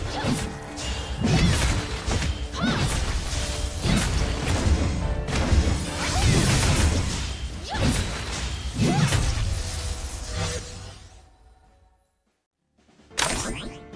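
Nothing technically wrong turns up anywhere in this audio, so there's no fault to point to here.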